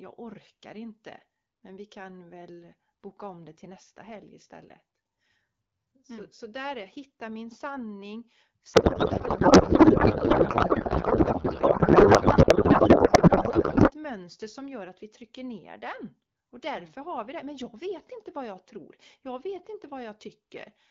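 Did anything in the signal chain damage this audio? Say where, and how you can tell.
Yes. From 8.73 s to 13.92 s there is a codec payload misread at the codec stage. The speech gives way to garbled noise and warble that barely tracks it, then clears abruptly at 13.92 s. Audio before and after carries only the light coding of AMR wideband at 12.65 kbit/s, so the frames arrive but are unpacked wrongly. This fits octet-aligned AMR being read as bandwidth-efficient, which puts every field at the wrong bit offset until framing agrees again.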